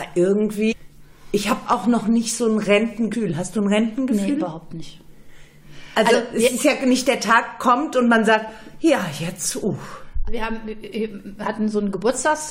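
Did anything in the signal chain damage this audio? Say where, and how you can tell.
Yes. Damaged data in the compressed stream, at 0.71–0.73 s, 3.12 s, 6.13 s and 10.27–10.29 s, shows up as four brief glitches at the codec stage. Corrupted bytes in those frames make the decoder misread them and lose sync until it finds the next valid frame header.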